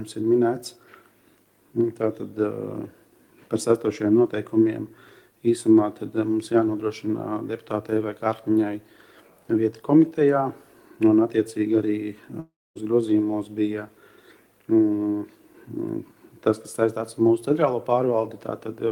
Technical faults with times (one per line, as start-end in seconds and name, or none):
12.39-12.78 long network dropout